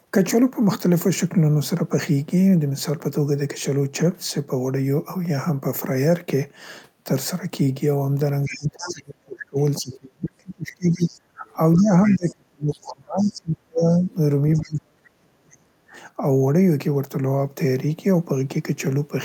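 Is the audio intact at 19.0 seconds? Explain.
Yes, the audio is intact at 19.0 seconds, with no audible fault at that moment.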